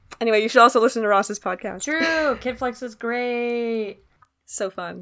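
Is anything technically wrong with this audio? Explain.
Yes. From 3.0 s to 5.01 s the resampler restarts on every block, treating each 250 ms block separately while converting 48 kHz to 16 kHz. Every block edge leaves an error, heard as ticks at a steady 4 Hz that appear only when sound is present, unlike dropout clicks, which are irregular.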